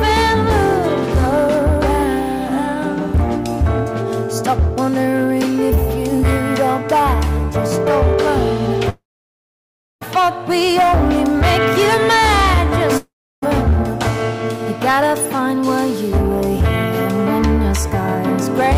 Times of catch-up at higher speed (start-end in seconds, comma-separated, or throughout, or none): none